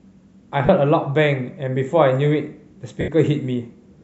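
Lost LE Audio frames twice forced the decoder to fill gaps by repeating its last spectrum with random signs. At 0.66 s a 30 ms loss smears the speech into a brief noisy blur; at 3.01 s a 70 ms loss starts as hiss, then fades toward silence.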